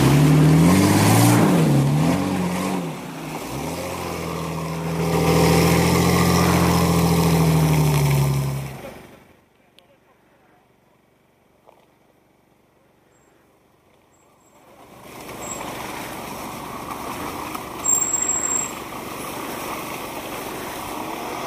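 Zipper noise runs from 14.49 to 15.37 s. The level moves by around 20 dB in unsmoothed 3 dB jumps, at roughly seven per second, and each abrupt step leaves a small click, so a ticking zip rides on the sound throughout the change.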